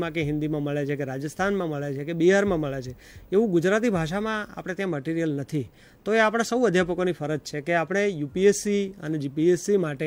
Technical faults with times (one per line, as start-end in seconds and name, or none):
none